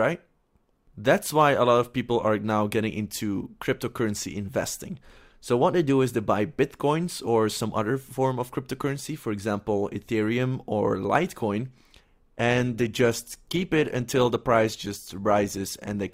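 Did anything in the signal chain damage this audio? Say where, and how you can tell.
Yes: at 12.47 s, an adaptive stream at a lower bitrate, a network-driven switch that fits Opus stepping from 64 to 24 kbit/s. The codec artefacts rise abruptly without any gap and last through 16.13 s.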